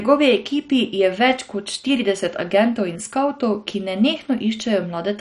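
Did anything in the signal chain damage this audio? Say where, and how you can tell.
Yes, at the codec. Throughout, nothing passes above 11.3 kHz, and the speech sounds dull and gurgling. The likely cause is MP2 compression starving its upper sub-bands, which fits a rate near 48 kbps.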